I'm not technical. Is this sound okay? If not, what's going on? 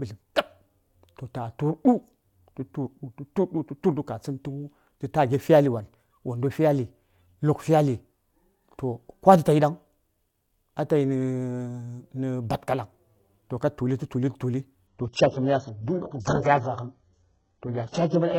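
No. From about 14.87 s to the end, this is an adaptive stream at a lower bitrate. The connection slowed, so the player switched to a lower-quality version. The speech suddenly turns dull, with nothing above 8 kHz, but there's no gap.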